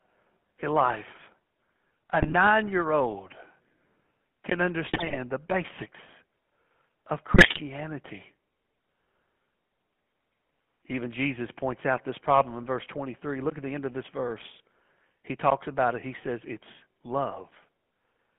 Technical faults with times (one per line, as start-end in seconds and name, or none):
0.00-18.38 GSM full-rate codec
2.20-2.34 GSM bit errors
4.88-5.18 GSM bit errors
7.33-7.61 GSM bit errors